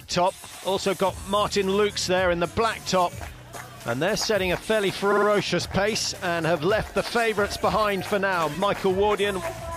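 Repeated frames: a short run of compressed data was sent again, so the decoder replays it. At 5.11 to 5.27 s a 52 ms block, fitting two frames, plays three extra times as a stutter; at 8.79 to 8.82 s a 26 ms block repeats once.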